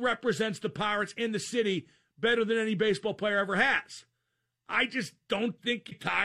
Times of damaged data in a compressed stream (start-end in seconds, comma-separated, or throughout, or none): 5.87-5.92